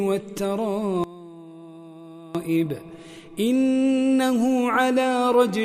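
From 1.04 to 2.35 s the sound collapses by about 20 dB to a faint residue, likely one channel inverted cancelling the shared content in mono.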